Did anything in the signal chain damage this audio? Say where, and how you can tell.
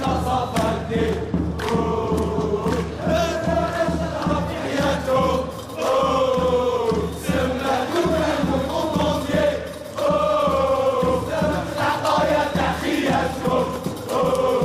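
No, nothing in the signal chain stood out as damaging this audio on listening.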